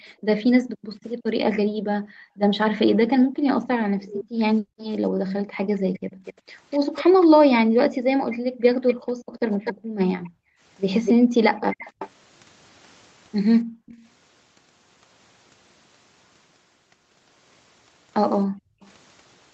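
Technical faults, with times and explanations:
0.04–6.24 s, 7.65–11.34 s, 13.64–13.86 s, 18.46–18.82 s: background gated by the echo canceller. The room sound drops out by up to about 40 dB while far-end audio plays, then recovers when suppression releases.
3.99–4.24 s, 5.78–7.24 s, 8.3–12.1 s, 13.86–14.06 s: echo leak. A delayed copy of the speech, roughly 250–310 ms late and about 10–25 dB down, is likely loudspeaker pickup the echo canceller failed to remove.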